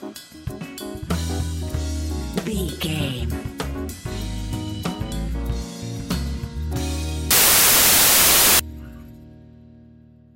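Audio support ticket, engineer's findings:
Loud broadband noise burst, 7.31 to 8.60 s, about 1.3 s long. Samples built from the wrong bytes. Probable component: sample reader or format conversion. Byte order swapped, or read offset by one byte. Fast-changing low bits land in the high end of each value. The result is loud, harsh hiss in place of the signal.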